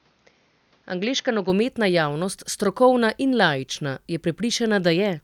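The input was likely switched to a poorer device from 0 to 1.5 s, before "javnost strokovna in laična". Passing nothing above 6.6 kHz, it makes the speech dull and boxy, about 5 dB quieter, over faint noise some 40 dB down, then clears without a gap.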